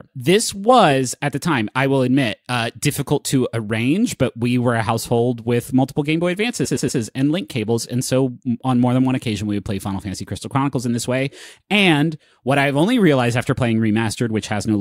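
From 6.64 to 6.99 s, repeated frames: one 116.1 ms block, consistent with a short run of compressed frames, plays three extra times. This produces a stutter of identical repeats that adds 348 ms, rather than a gap or smeared concealment.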